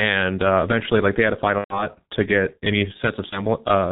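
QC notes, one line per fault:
Throughout: G.723.1 codec. The sound is muffled and hoarse, with nothing above 4 kHz and smeared consonants. Heavy compression and slow 30 ms frame updates blur detail, which fits a 6.3 kbit/s G.723.1 stream.
1.58–1.89 s and 3.29–3.41 s: VoIP packet loss concealed by the speech codec. The decoder stretches its last pitch and filter into a fading buzzy tone or coloured noise. The first gap points to about 120 ms lost, the second to 30 ms. Sound stays weak briefly after recovery.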